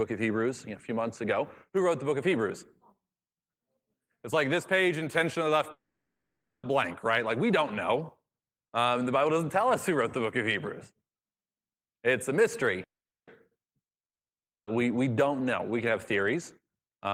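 Speech with network faults. Packets were likely held up in two call audio freezes, at 5.71–6.65 s and 12.83–13.29 s; the jitter buffer ran dry, so the sound stretches into near-silence for about 0.77 s and 0.42 s, then resumes where it stopped with nothing lost. A long network dropout, likely from packets that never arrived, blanks 14.05–14.69 s, and those 0.62 s of audio are simply gone. From 16.59 s to the end, a jitter buffer speed-up trims short pitch-period slices, about a tenth of a second in total, so the speech runs about 14% fast at unchanged pitch and sounds hurried.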